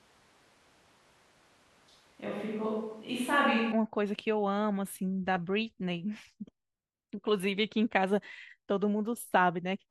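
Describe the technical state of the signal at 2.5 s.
At 2.5 s the speech sits inside a switch to a distant microphone that is already under way when the clip begins and runs until 3.72 s. The sound is roomy and hollow with thinner bass, at much the same level, with background noise roughly 35 dB below the speech. The likely cause is that the close microphone's feed was lost or left out, leaving a more remote pickup.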